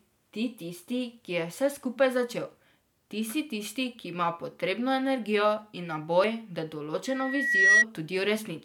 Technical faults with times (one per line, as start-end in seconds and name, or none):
1.28 audio missing between chunks
6.24 audio missing between chunks
7.06-7.85 loudspeaker feedback squeal